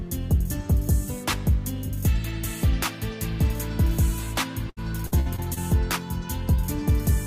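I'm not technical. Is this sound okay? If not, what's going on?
No. Repeated packet loss hits 4.69 to 5.58 s. Five brief gaps get filled by repeating sound, so it turns choppy.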